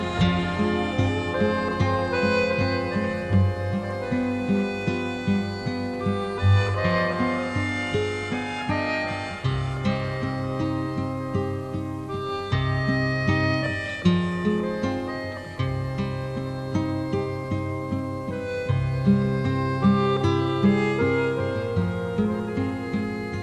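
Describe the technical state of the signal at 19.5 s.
Around 19.5 s the signal is intact, with no dropout, distortion, glitch or other fault to be heard at that point.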